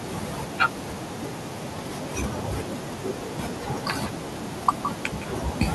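A faint delayed copy of the speech trails it from 4.04 to 4.19 s and again from 5.09 to 5.26 s, arriving 162 ms late at roughly 10 dB below. This echo leak likely comes from a loudspeaker-fed echo canceller letting some pickup through.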